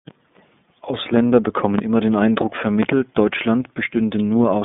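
iLBC codec artefacts run through the whole speech clip. The sound is squeezed into a narrow telephone band, roughly 150 Hz to 3.6 kHz, with nothing above 3.7 kHz. Each block of excitation is coded on its own, which here fits 30 ms frames at about 13.33 kbps. The damage is plainly audible: the speech is intelligible but rough, buzzy and somewhat synthetic, lacking the air and sibilance of full-band audio.

A loud pop lands from 1.79 to 1.81 s, a single sharp click peaking about 10 dB above the speech, with the talking carrying on underneath. Two more pops follow in quick succession between 2.83 and 2.94 s, at a similar level. The likely cause is a sudden voltage step or pulse from a plug, switch, static discharge or driver glitch, which the following circuitry turns into a brief percussive transient.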